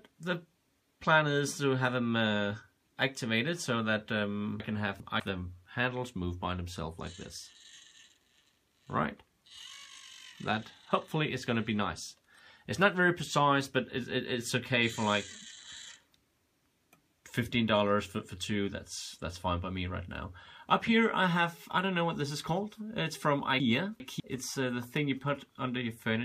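Chunks out of order occur at 4.6 to 5.2 s and again at 23.6 to 24.2 s. In each span one 200 ms chunk plays two chunks late, after the audio meant to follow it. Nothing is lost, but the sequence jumbles briefly, with three hard joins.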